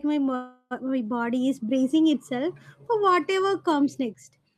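A speech clip with a call audio freeze from 0.35 to 0.73 s, just before "my body is bracing". The last sound is stretched into a fading buzz or hiss for about 350 ms, then about 30 ms of silence, and speech resumes with nothing lost but everything after it is about 354 ms late. On a spectrogram the frozen segment shows as flat, smeared horizontal bands that fade out. The likely cause is delayed packets draining the jitter buffer.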